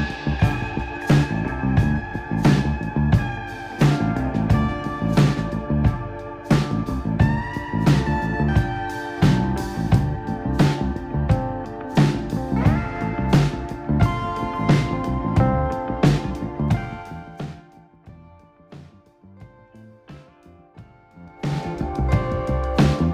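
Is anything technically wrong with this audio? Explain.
Yes. Zipper noise occurs from 16.56 to 18.00 s, as the level falls about 25 dB, and from 21.12 to 21.68 s, as it rises about 25 dB. The gain moves in 2 dB jumps with no smoothing, and each jump clicks, giving a ticking of roughly ten per second, then a faster zipping of about thirty per second.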